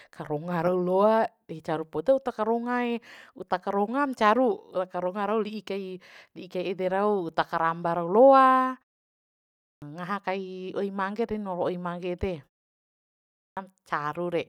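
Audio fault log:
9.41–9.82 s and 13.22–13.57 s, clipped start after a pause: after pauses of 0.66 s and 0.81 s, the first 0.41 s and 0.35 s of speech vanish. The output device sleeps in silence and needs time to wake, so speech resumes abruptly.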